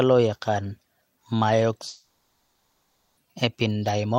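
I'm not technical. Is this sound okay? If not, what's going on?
No. From about 1.87 s to 3.19 s, roughly 1.3 seconds of the speech is missing. This is a long network dropout, most likely caused by the connection stalling so no audio reached the listener. The player filled the gap by stretching the last bit of sound into a buzzy, fading hiss rather than going silent. When the speech resumes at 3.19 s, it skips ahead, and the lost part never plays.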